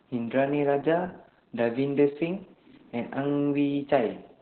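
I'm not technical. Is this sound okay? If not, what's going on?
No. The whole clip has heavy Opus voice compression. The speech was squeezed hard to save data, so nothing above 4.2 kHz is left. That makes it sound muffled, like an old phone line. It also comes out hoarse and slightly robotic.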